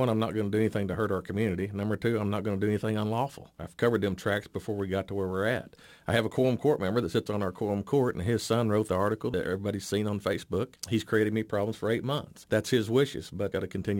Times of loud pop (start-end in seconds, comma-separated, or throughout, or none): none